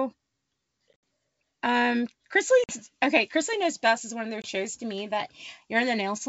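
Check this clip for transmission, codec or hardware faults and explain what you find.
The speech has three gaps from packet loss on an ADPCM call, at 0.93 s, from 2.64 to 2.73 s, and from 4.42 to 4.48 s. The last falls between "best is one of" and "to me that". At 0.93 s about 80 ms is lost in scattered holes over 100 ms, the longest 70 ms. The middle gap loses 50 ms and the last 20 ms. Each hole is hard-edged silence. Afterwards the decoder's predictor and step size no longer match the sender's, so the speech returns with brief, slight distortion that settles within tens of milliseconds. That recovery transient separates this from a clean dropout in uncompressed audio. The surrounding wideband G.722 coding, which sounds like the full 64 kbit/s mode, adds only faint upper-band hiss.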